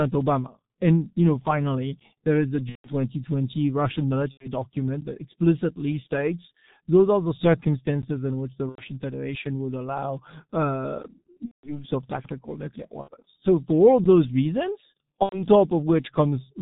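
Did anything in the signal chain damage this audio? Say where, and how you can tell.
Yes. Three kinds of damage are audible, from the codec, the network and the chunked delivery.

The G.723.1 codec stage is responsible for the damage present throughout. Nothing reaches above 4 kHz, the speech is muffled and hoarse, and consonants are smeared. The heaviness of that damage fits its 6.3 kbit/s mode. The codec models the voice in coarse 30 ms frames at very few bits, so fine spectral detail and fast transitions are lost. On a spectrogram there is a hard ceiling at 4 kHz and blurry, blocky formant tracks.

VoIP packet loss concealed by the speech codec happens on the network side, with the decoder filling the holes. It occurs at 2.69–2.95 s (right after "finally there is a"), 4.31–4.49 s (just before "document that explicitly states"), 8.69–8.83 s, 11.45–11.85 s, 13.01–13.10 s and 15.23–15.45 s. 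The missing stretches run 60 to 180 ms, which fits two to six lost 30 ms frames. In each, the last pitch and filter are stretched into a buzzy tone or a coloured noise that fades. The waveform shows a decaying envelope, and the spectrogram shows frozen harmonic stripes dimming away, followed by weak, distorted speech for a moment after recovery.

A gap between chunks comes from the playback or storage buffering. It occurs at 5.01 s (just before "that explicitly states those"), 8.02 s and 14.04 s. Each is a 12 ms hole with hard edges, and the holes fall on a 3 s chunk grid. No sound is lost, but each join is broken, likely by padding or a late chunk start. The waveform shows a flat, silent segment with vertical edges. The spectrogram shows a thin, full-height blank stripe.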